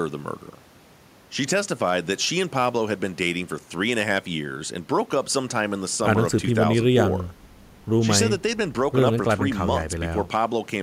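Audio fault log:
Nothing to log here, as no technical faults turn up anywhere in this speech.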